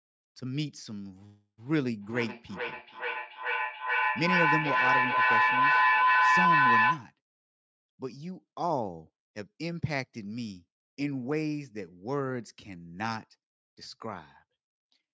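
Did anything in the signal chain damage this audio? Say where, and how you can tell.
Yes. A feedback howl from an acoustic loop in the call, two devices sharing a room, builds from 1.66 s to 7.15 s into a tone around 1 kHz, with the loop repeating roughly every 400 ms and peaking about 7 dB above the speech. A spectrogram shows one bright horizontal line, with the waveform's envelope swelling.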